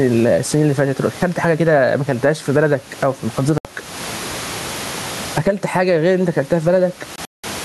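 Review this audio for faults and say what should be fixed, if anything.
Gain pumping runs through the whole speech clip. The background room noise sits normally about 32 dB below the speech, and the gain swings by roughly 20 dB. Unlike a plain noise gate, the level rises smoothly instead of snapping on and off. The likely cause is input gain set far too high, with a fast limiter clamping it. Lowering microphone gain so the limiter rarely engages would prevent it.

Bluetooth dropouts cut the sound at 3.58–3.65 s, a silence of about 70 ms that fits three lost packets, and at 7.16–7.44 s, where about 209 ms goes missing in gaps spread over 279 ms, the longest lasting 186 ms. The speech resumes further along instead of picking up where it stopped, which separates this from a buffer stall. Keeping the headphones close, with no obstructions or competing 2.4 GHz traffic, would likely prevent it.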